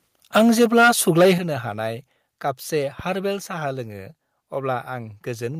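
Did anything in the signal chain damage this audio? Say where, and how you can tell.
Yes. From 0.35 to 1.31 s the loudest syllables are flattened and carry a harsh, crackling edge. This is microphone overload at the converter stage. The peaks would have run about 8 dB past full scale, so their tops are sheared off square. Roughly 7 percent of the samples in that stretch sit pinned at the limit. The likely cause is a microphone input volume set too high for this talker.

At 1.38 s the microphone volume is stepped down. The speech and the background noise fall together, by about 9 dB, in a single jump. There is no gradual fade. Because both fall at once, the change happened before the sound was captured, not in a later edit. It comes just after the distorted stretch ends. That timing points to call processing, which likely detected the clipping and cut the device's input volume in one step.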